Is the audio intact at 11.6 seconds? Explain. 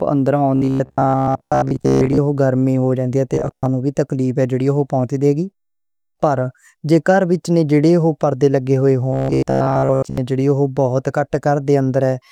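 Yes, the speech plays through cleanly at 11.6 seconds with no audible fault at that moment.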